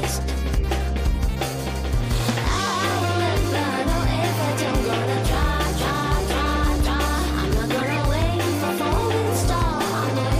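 No technical faults can be heard in this audio, with nothing that points to a problem in recording, transmission or playback.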